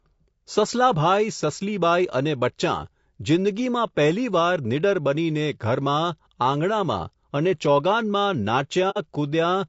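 From the start the speech has a rough, grainy texture, with noise filling the gaps between voice harmonics and a lowered or synthetic top end. This is plainly audible low-delay AAC compression, likely the AAC-ELD codec used for calls. Its very short frames resolve pitch poorly, and the damage points to a bitrate of about 32 kbps.

From 8.90 to 8.98 s the sound fades out and back in, leaving a brief silent gap with soft edges. This is AAC frame loss with muting. The decoder zeroed the missing spectrum, and the overlapping windows smoothed the gap's boundaries. The length fits two lost frames. A hard packet dropout would cut off abruptly and usually click, but this hole tapers at both ends.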